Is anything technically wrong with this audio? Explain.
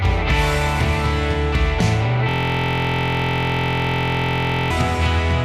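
Yes. From 2.29 to 4.71 s, a system hang loop repeats one 23.22 ms buffer, consistent with 1024 samples, producing a steady buzz at 43.1 Hz.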